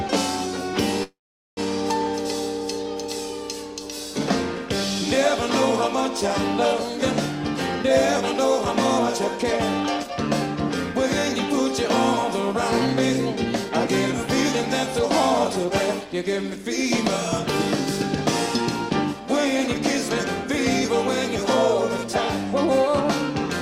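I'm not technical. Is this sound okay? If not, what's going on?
No. Around 1.03 s, packets carrying the sound were likely held up on the way, causing a call audio freeze. The receiver stretched the last bit briefly, then mostly went quiet until 1.59 s. Nothing is lost, but about half a second of pause is added.

Afterwards the jitter buffer speed-up kicks in. The receiver trims tiny slices to catch up, so the sound runs about 5% faster from 9.80 to 16.67 s and about 4% faster from 18.61 to 20.44 s, without the pitch changing, and can feel slightly hurried.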